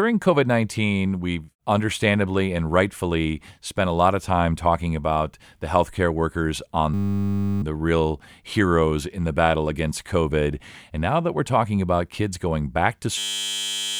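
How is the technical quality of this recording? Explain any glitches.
Two system hang loops break the speech. At 6.94 s, after "the healthcare workers on", a 10 ms slice repeats until 7.62 s, resuming at "the real heroes in". At 13.18 s, after "talking about kids going", it recurs and runs to the end. The driver stalled while the hardware kept replaying one short ring buffer, producing a steady 100 Hz buzz in place of roughly 0.7 s of audio each time.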